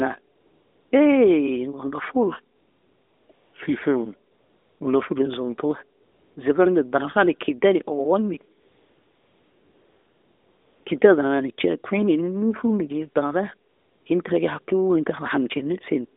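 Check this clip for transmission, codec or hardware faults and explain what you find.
AMR comfort noise is present during the pauses at 0.36–0.92, 2.56–3.30, 3.32–3.54, 4.32–4.80, 6.02–6.36, 8.62–10.86 (just after "ni owonni") and 13.70–14.06 s. The sender classed these gaps as silence and stopped transmitting speech frames, so the receiver synthesised a smooth, even hiss from a rough level and spectrum estimate. The real background drops out and this flat noise switches in and out in its place. The narrowband mobile codec carrying the call is audible as a line band of about 250 Hz to 3.6 kHz with light coding roughness, which fits AMR-NB's 12.2 kbps mode.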